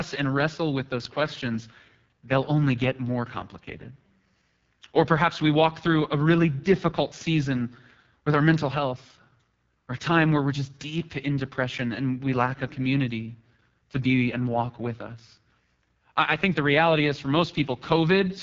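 From start to finish the speech carries the sound of the AMR wideband (HD Voice) codec at a very low rate. The rasp and roughness fit a 6.6 kbit/s stream. At that rate the pulse-driven vocal tract model has too few bits to shape each sound well. Voicing turns harsh and buzzy. The codec damage is heavy throughout. Nothing is present above 7.5 kHz. The top band carries only thin, shaped noise rather than real detail.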